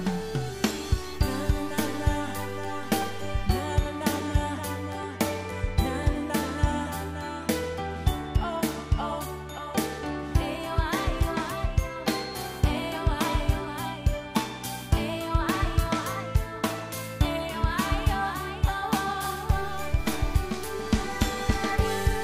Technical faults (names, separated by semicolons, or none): periodic USB or driver dropouts